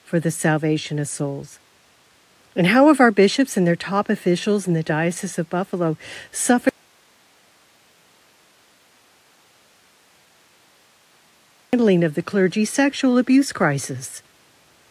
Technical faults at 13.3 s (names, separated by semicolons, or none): none